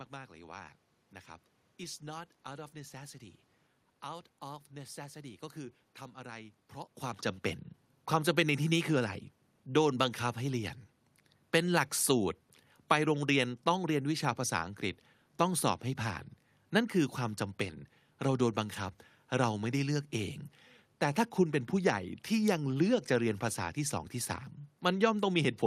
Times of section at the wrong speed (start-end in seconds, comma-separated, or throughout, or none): none